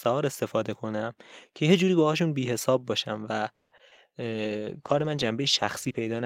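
From 3.53 to 4.09 s, repeated packet loss hits the stream. Four gaps open in quick succession, the longest 180 ms, and about half the stretch is patched by extending the preceding sound, with 60 ms simply missing. The speech turns choppy and robotic.

At 4.22 s a call bitrate drop follows. The bandwidth estimate falls and the encoder goes from 48 kbps to 16 kbps until the end, coding more coarsely and trimming high frequencies, so the speech sounds rough, watery and muffled.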